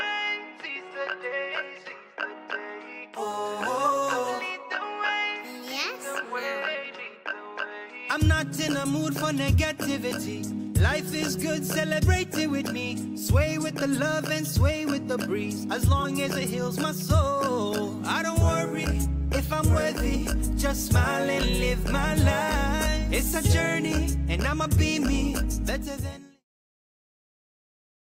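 Nothing stood out on listening, and the smooth fade-out near the end, finishing at about 26.45 s, eases the level away gently as intended.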